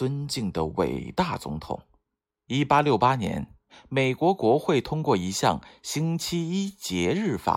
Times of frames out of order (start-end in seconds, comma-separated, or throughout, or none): none